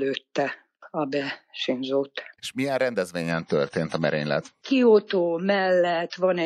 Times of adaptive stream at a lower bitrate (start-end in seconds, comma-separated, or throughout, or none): 3.31-6.45